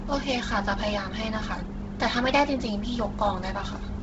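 The speech runs through what is likely Bluetooth LC3 compression at a low bitrate, which fits roughly 16 kbps in 10 ms frames. Heavy damage throughout leaves nothing above 7.7 kHz, and noise filling in the upper band gives the sound a breathy, grainy edge.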